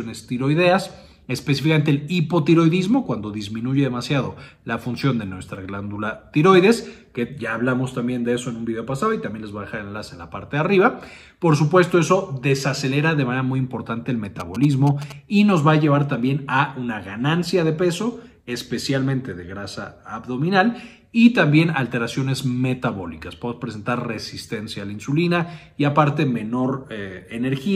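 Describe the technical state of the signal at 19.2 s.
At 19.2 s the signal is intact, with no dropout, distortion, glitch or other fault audible at that moment.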